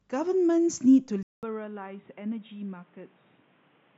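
Speech that, at 1.23 s, goes silent for 200 ms and then turns dull, roughly 10 dB quieter, and noisier until the end, likely an input switched to a poorer device. The spectrogram shows a gap and nothing above 3.8 kHz after it, and the waveform shrinks.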